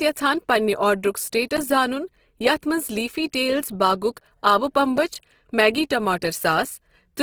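The speech in this clip has likely passed through Opus compression in its music-oriented CELT mode at a low rate, roughly what 16 kbps would give. The encoder keeps each band's energy but runs short of bits, so it fills bands with folded or noise-like content instead of leaving gaps. The codec damage is plainly audible as a rough, grainy, noisy texture on the voice, though the band still reaches about 20.2 kHz. Separately, the playback or processing chain twice most likely failed to deliver an output buffer in time, and zeros went out in its place. Just after "یژھان پننہِ آرڈرُک", at 1.57 s, the sound drops to digital silence for about 11 ms, which fits a 512-sample buffer. At 4.98 s a shorter hole of about 5 ms fits a 256-sample buffer. Each cut starts and ends with no fade, and the gaps register as brief ticks.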